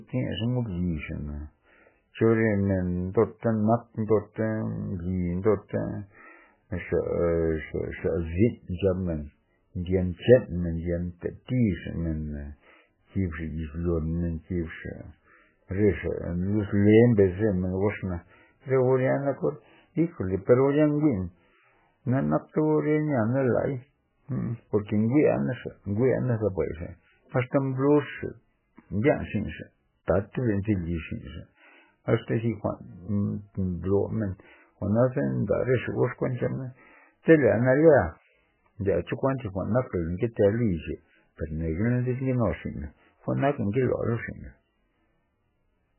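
From start to finish the speech sounds heavily squashed, and the likely culprit is MP3 compression at a very low bitrate, something in the region of 8 kbps. Nothing survives above about 3 kHz, so the top end is simply sliced off and everything sounds dull and boxed-in. With so few bits to go around, the encoder keeps dropping quieter frequency detail and bringing it back frame by frame, which gives the whole thing a watery, swirly character and smears the sharper sounds.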